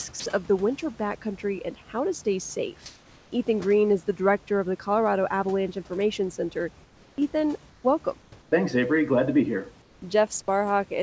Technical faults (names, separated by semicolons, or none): sound dropped by the voice detector; comfort noise in place of the background